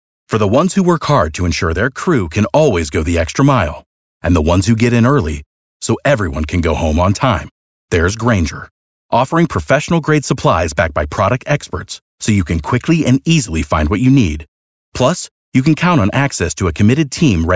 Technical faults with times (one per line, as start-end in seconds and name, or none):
none